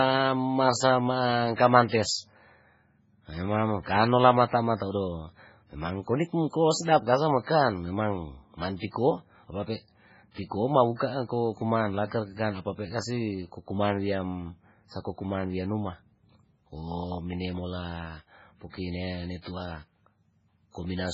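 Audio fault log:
Throughout: MP3 compression, likely at a very low bitrate. Heavy codec damage leaves nothing above 7.6 kHz. Weak frequency lines drop in and out between frames. The sound turns watery and swirly. Sibilants chirp metallically. Attacks smear.
1.54 s to 1.58 s and 19.41 s to 19.46 s: pre-echo. Each sharp attack is preceded by short hiss, spread over 40 ms and 46 ms. The codec spreads noise across its whole block, so noise meant for the loud onset fills the quiet before it. Both attacks sound soft.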